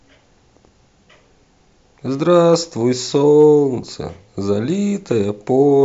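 A speech recording with brief crackles on two peaks, at 2.54 s and from 3.39 to 3.45 s: hard clipping, where peaks pushing about 1 dB past the ceiling are cut flat.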